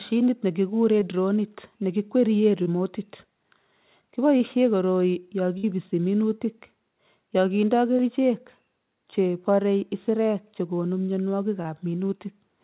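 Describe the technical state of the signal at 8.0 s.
Just after "yo kindoi", from 7.97 to 8.01 s, a short concealed packet loss left about 20 ms undelivered. The receiver covered the gap by extending the preceding sound, pitch or shaped noise, then blended back, producing a brief smear or wobble.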